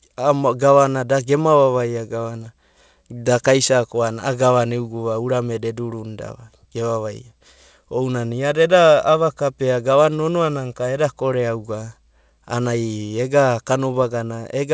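Nothing stood out on listening to this speech recording, which carries the band limit of a wideband call path, with no content above about 8 kHz.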